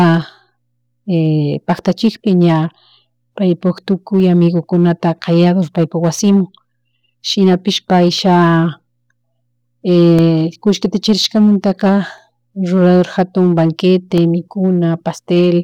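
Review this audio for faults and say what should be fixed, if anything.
Evenly spaced ticks cut into the speech every 2.0 s, from 0.21 s to about 14.18 s, roughly seven in all. These are periodic USB or driver dropouts: something stalls the USB bus or audio driver on a fixed schedule, and each stall drops around a millisecond of audio, replaced by silence. The gaps only click where speech is present, which is why the ticks follow the signal. Prevention: identify and disable the recurring background task polling the bus, and raise the driver buffer size.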